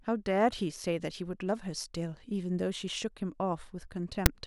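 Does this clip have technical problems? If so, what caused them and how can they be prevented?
Yes. At 4.26 s the player read the file's tag block, text metadata followed by zero padding, as if it were audio samples. That produces file tags played as audio: a hard-edged, one-sided rasp of static that drops straight to silence. Prevention: parse and skip metadata blocks before decoding.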